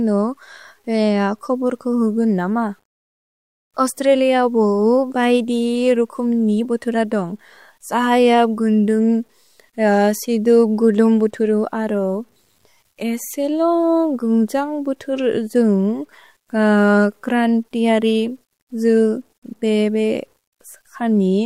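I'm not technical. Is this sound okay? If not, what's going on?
No, not quite. All the way through, the speech has a grainy, fizzy roughness that clings to the voice and shifts as it does. It's most noticeable in the quiet moments, like trailing ends of phrases, which turn gritty or sputter instead of fading smoothly. That points to low bit depth without dither: the audio was likely stored with too few levels, roughly 10 bits, and simply chopped down without the light masking noise that would hide the steps.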